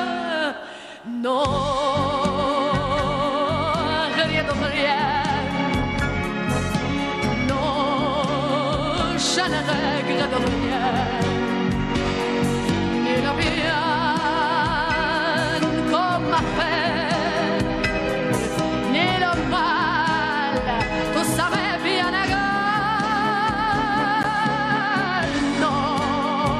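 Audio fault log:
24.23 s, block of digital silence: the audio drops straight to silence for about 12 ms and jumps back with no fade, so it is heard as a single tick. The length fits a 512-sample buffer not filled in time.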